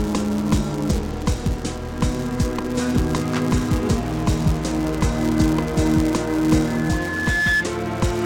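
From start to finish a buzz at 172 Hz runs under the sound. This is a filter restarted on every block: the filter drops its stored state at each block boundary and begins again from silence, so every block opens with a small transient. A 172 Hz repeat rate fits a 256-sample block at 44.1 kHz. Unlike random clicks from dropouts, these ticks are perfectly regular and get louder or quieter with the sound's level.

From 6.66 s to 7.67 s a loudspeaker feedback squeal appears. A microphone is picking up the loudspeaker it drives, and at 1.7 kHz the loop gain climbs past one, so that frequency feeds on itself. It swells over roughly three quarters of a second to about 5 dB above the rest of the sound. What separates it from a steady whistle or test tone is that build-up: a single pitch growing on its own rather than starting at full level.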